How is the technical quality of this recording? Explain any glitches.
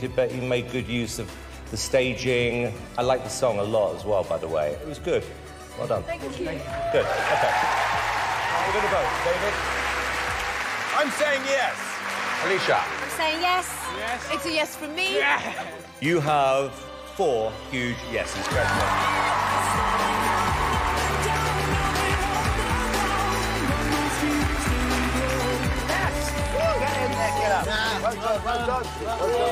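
No glitches turn up anywhere in this recording, so there's nothing here that needs explaining.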